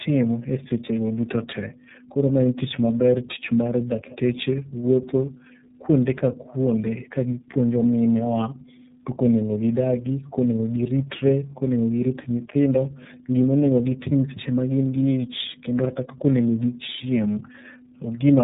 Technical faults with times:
0.00-18.43 tandem speech coding

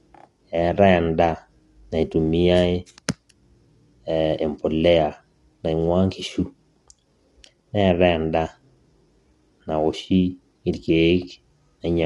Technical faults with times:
0.00-12.06 low-delay AAC compression

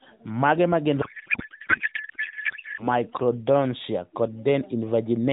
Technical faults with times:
1.02-2.87 codec payload misread

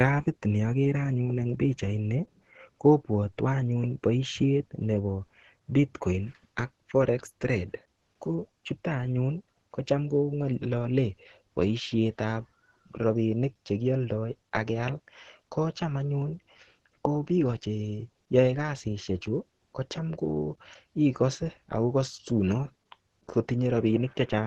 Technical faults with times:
0.00-24.46 Opus compression

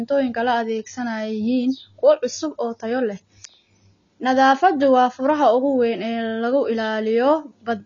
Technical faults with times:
0.00-7.85 AAC compression

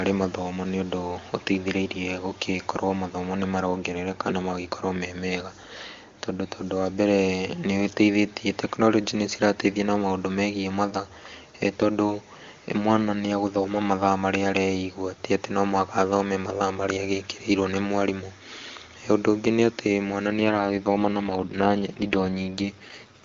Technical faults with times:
20.28-23.24 AMR rate drop

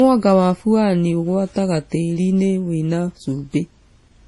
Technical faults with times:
0.00-4.28 transcoding between lossy codecs

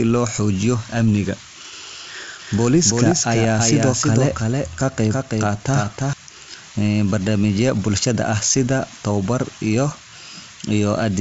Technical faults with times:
2.39-6.13 doubled audio track

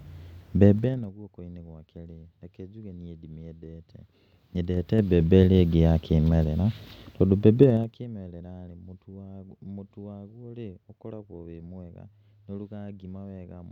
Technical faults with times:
0.76-1.12 zipper noise
3.80-5.32 zipper noise
7.60-8.08 zipper noise

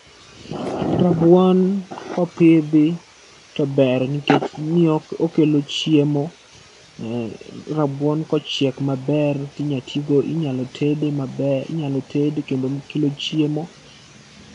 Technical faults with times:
none

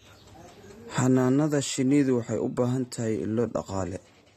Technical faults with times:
0.00-4.37 AAC compression

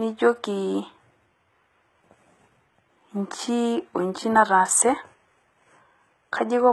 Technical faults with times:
0.00-6.72 HE-AAC compression

